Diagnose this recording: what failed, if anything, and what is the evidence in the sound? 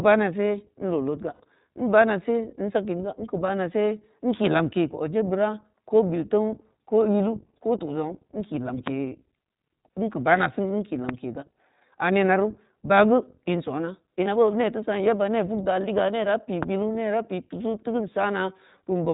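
iLBC codec throughout: the whole recording is narrowband with nothing above 4 kHz and has a rough, synthetic texture, which fits iLBC at 15.2 kbps with 20 ms frames.

Lost iLBC frames at 1.34–1.41 s, just after "in leu leudga" (60 ms), and at 14.24–14.28 s (20 ms): network packets dropped, and the decoder held a buzzy repeated pitch cycle before recovering immediately.

Loud pops at 8.87–8.90 s (about 20 dB above the sound), 11.09–11.11 s, and 16.63–16.65 s after "liga ne da peu" (both about 15 dB): single sharp clicks over continuing audio, likely analogue voltage transients.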